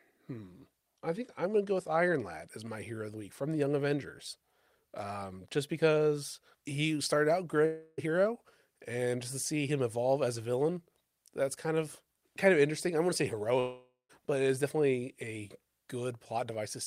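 Speech with two holes in it. At 7.65 to 8.00 s about a third of a second goes missing, papered over by a fading buzz or hiss. At 13.60 to 14.11 s half a second drops out, the fill fading to near-silence before speech resumes further on. Likely a long network dropout each time.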